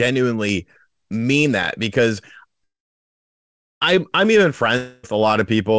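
At 2.64 s the speech stalls in a call audio freeze: the last sound smears into a short fading buzz, then about 1.1 s of silence until 3.83 s. It resumes where it stopped, nothing skipped, just 1.17 s later, likely because delayed packets emptied the jitter buffer.

From 4.77 to 5.05 s comes a long network dropout. The concealment buzz fills all 0.26 s without fading to silence, and unlike the freeze, the speech comes back further on with that 0.26 s missing, likely due to packets that never arrived.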